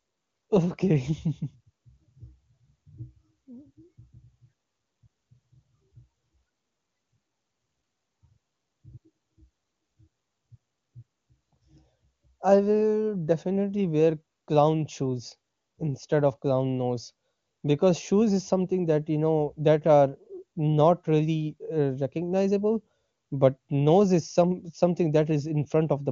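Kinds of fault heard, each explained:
No faults heard in this speech, which is carried over the AMR wideband (HD Voice) codec at 23.85 kbit/s, its highest rate, where any coding damage is faint at most.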